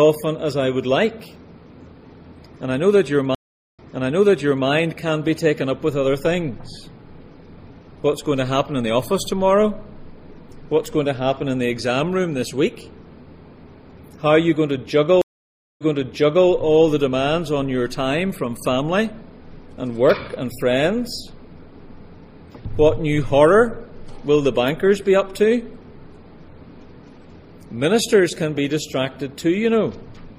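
At 3.35 s the audio drops out for about 0.4 s, then picks up again roughly 0.93 s earlier than where it stopped, so you hear a chunk repeat. That's a stream reconnect: the connection broke, the player reopened it, and the server resent a burst from a bit back. The same thing happens at 15.22 s, this time with a longer gap of about 0.57 s and a jump back of around 0.7 s.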